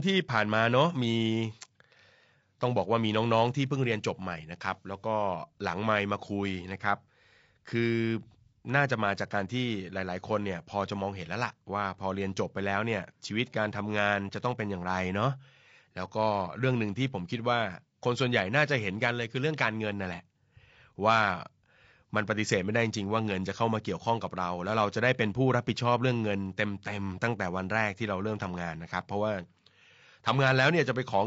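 From start to finish the speech sounds rough and grainy, with noise between the harmonics, likely low-delay AAC compression whose short frames blur pitch at a bitrate near 32 kbps.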